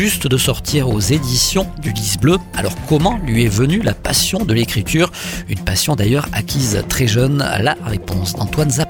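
The audio carries a regular click that repeats every 1.39 seconds, from 1.10 s to 8.04 s. The spacing stays even throughout. This is the pattern of clock drift buffer slips. Two devices likely run on separate clocks that disagree by roughly 500 parts per million. The buffer between them slowly drifts until a small block of a few dozen samples is dropped or repeated. Each jump in the waveform is heard as a brief pop.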